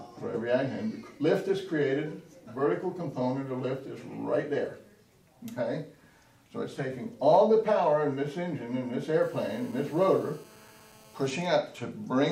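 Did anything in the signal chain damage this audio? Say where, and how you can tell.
Yes. The analogue wiring picked up GSM phone buzz from 9.22 to 11.32 s. A steady, raspy 217 Hz buzz with many harmonics sits about 27 dB below the signal. A nearby 2G phone in a call transmits 217 bursts a second, and the circuit rectifies them.

GSM signalling bursts follow in the same analogue stage, from 11.32 to 12.26 s. The buzz gives way to even ticks with a longer buzz twice a second, roughly 35 dB down. The phone's user has gone silent, so it sends only short burst groups. The circuit rectifies these too.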